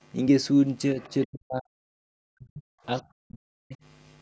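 From 0.94 to 0.99 s the speech dips slightly, by a few decibels. This is speech suppressed in double talk. Both ends were likely talking at once. The echo canceller could not tell the near talker from the loudspeaker echo, so it turned everything down. From 1.0 to 1.27 s the other side's voice leaks through, faint and well below the speech. The canceller likely left some of the loudspeaker sound in the microphone signal. It sounds like a second voice behind the talker. Deep suppression follows from 1.27 to 1.67 s, 1.97 to 2.75 s and 3.2 to 3.77 s. At its deepest, the talker nearly vanishes, dropping by about 40 dB. The speech is turned down hard, as the suppressor likely mistook it for echo. At 2.97 s a very brief, very faint scrap of the other side's voice leaks through again. Throughout, the call's microphone processing limits the audio to 8 kHz and below.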